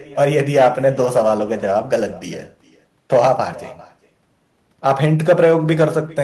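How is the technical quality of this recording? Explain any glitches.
The recording has one fault, present for its whole length. Echo with no canceller, throughout: the other end's loudspeaker feeds its microphone, so speech returns around 0.4 s late as a thin copy about 22 dB down.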